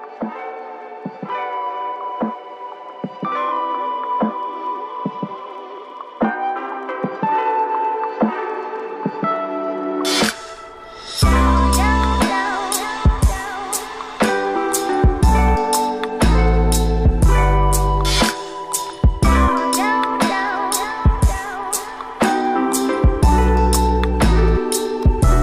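No technical faults can be heard in this audio, so there is nothing to describe in time order.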